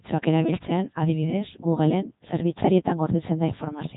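Throughout, the speech passes through the Codec 2 vocoder, rebuilt from pitch and spectral envelope rather than waveform, fitting 3.2 kbit/s: heavily robotic, buzzy, nothing above 3.8 kHz.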